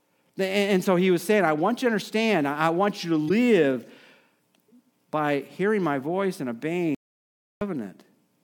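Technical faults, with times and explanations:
3.25–3.31 s, damaged data in the compressed stream: Right after "I want you to", the sound briefly breaks up. Corrupted bytes made the decoder misread those frames. It lost sync and hunted for the next frame header.
6.95–7.61 s, audio dropout to silence: After "hearing my voice and", the speech cuts off mid-flow. About 0.66 s of silence follows, with no room tone. The input was likely lost while recording continued writing silence, so that speech is gone.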